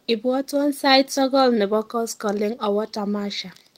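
No technical fault can be heard anywhere in the speech recording, which carries no dropouts, distortion, noise bursts or other defects from its opening to its final moment.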